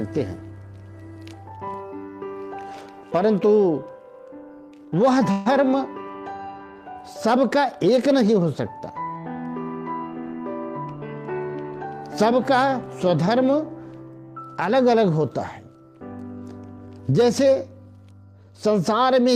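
At 5.31 s there's a call audio freeze lasting about 0.16 s: the last bit of sound stretches into a fading buzz, then picks up exactly where it left off. That's likely packets held up in transit draining the jitter buffer, so roughly 142 ms of extra delay gets inserted with nothing lost.

Then from 10.69 to 11.65 s you get a jitter buffer speed-up. The receiver trims tiny pitch-period slices over and over to shed the built-up delay, around 150 ms in total, so the sound runs at about 114% speed with unchanged pitch and feels rushed.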